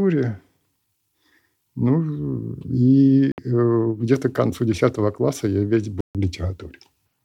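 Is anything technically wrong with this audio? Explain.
Yes, there are two dropouts in this speech. A Bluetooth dropout appears at 3.32 to 3.38 s, a hole of about 61 ms, and again at 6.01 to 6.15 s, about 142 ms. Each time the sound cuts abruptly to silence and then resumes further along, as if it had kept playing through the gap. The likely cause is wireless packets arriving too late for the headphones, which then drop them and output nothing until good data returns.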